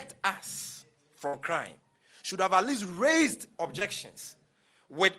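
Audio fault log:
1.27–1.35 s, burst of packet loss: the last sound is held and fades for about 56 ms, then resumes with about 60 ms skipped, as consecutive packets never arrived.
3.79–3.83 s, short concealed packet loss: a brief smear where the receiver extended the preceding sound for about 17 ms, bridging roughly 20 ms that never reached the decoder.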